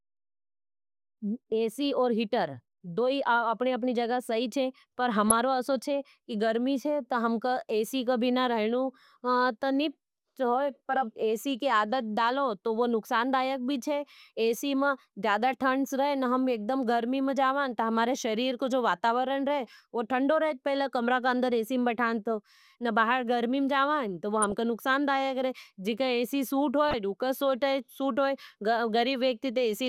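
DAB burbling at 5.28–5.32 s, 24.42–24.52 s and 26.91–26.94 s: bit errors corrupt MP2 sub-bands, giving brief blips of noise in narrow bands rather than clicks or full dropouts.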